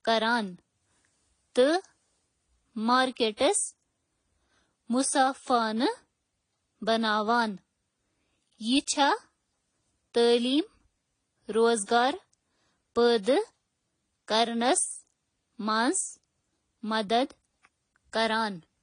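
From start to finish the speech sounds smeared and swirly, with nothing above 9.8 kHz. That's likely transcoding between lossy codecs, two low-bitrate passes stacking their artefacts.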